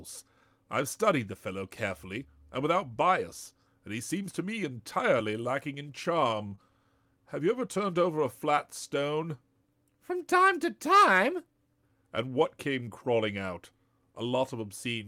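At 6.47 to 6.53 s, just after "me entirely lacking in", a short stall from a late packet holds the last sound for about 40 ms while the jitter buffer sits empty. Nothing is lost, so speech resumes exactly where it paused, which is the sign it is a stall rather than a dropout.

Right after, at 6.55 to 6.59 s, a short concealed packet loss removes 20 ms of speech. The receiver fills it with a synthetic continuation, which gives a brief smear or wobble. Unlike the stall before it, real audio is actually gone here and not merely delayed.

From 11.01 to 11.55 s, after "time to", a jitter buffer speed-up trims short pitch-period pieces to shed excess delay. Around 40 ms is removed in total, and speech runs at about 107% for that half-second. The pitch stays the same, so it sounds hurried, not higher or chipmunk-like.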